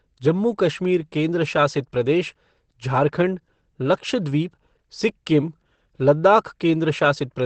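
Throughout the speech, the audio was likely passed through Opus compression at a very low rate, which pushed the encoder into its speech-oriented SILK mode, consistent with about 12 kbps. The damage is heavy: nothing above 8.5 kHz survives, so the sound is muffled and hoarse.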